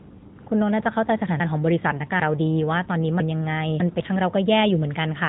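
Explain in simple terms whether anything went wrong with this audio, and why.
The speech runs through an AMR narrowband mobile codec for the whole clip, so it sounds like an old phone call. Nothing above about 3.8 kHz survives, which makes it dull, and the voice has a plainly audible buzzy, synthetic edge. That is different from simple muffling, because the voice itself sounds rebuilt.

Chunks out of order happen twice, from 1.4 to 2.2 s and from 3.2 to 4.0 s. Each time a 200 ms piece plays three pieces too late, giving a jumbled stretch. Unlike a dropout, no sound is missing; it is simply shuffled.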